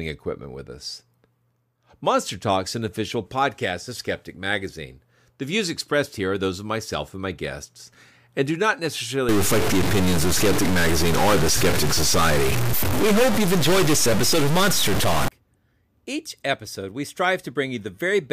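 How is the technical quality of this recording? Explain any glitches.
The recording has one glitch, a stuck bit. From 9.29 to 15.28 s, just after "guests and do not", a harsh buzz rides the speech and even fills the pauses with noise at roughly -15 dBFS. This is likely one converter bit held fixed. Unlike clipping, the distortion persists at low levels.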